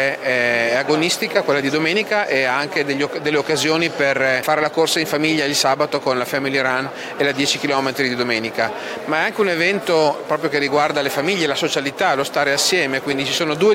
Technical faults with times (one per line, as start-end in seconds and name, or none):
0.00-13.74 Wi-Fi interference